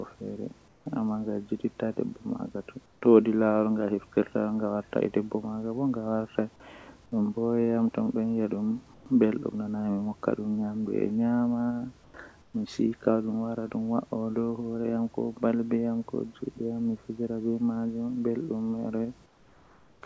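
Comfort noise in place of the background, likely from the sender halting transmission during pauses: at 0.68–0.86, 2.86–3.02, 8.94–9.06, 12.04–12.14, 12.42–12.54 and 19.26–20.02 s the room's background noise becomes flat synthetic noise, mostly about 3 to 6 dB quieter, unchanged in level at 12.04 s.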